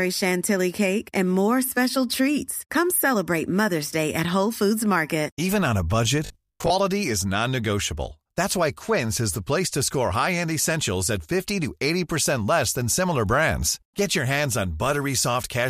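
Likely starved of new audio, playback repeats a roughly 20 ms buffer from 6.26 to 6.70 s after "on a budget", giving robotic sound: a rigid 50 Hz buzz.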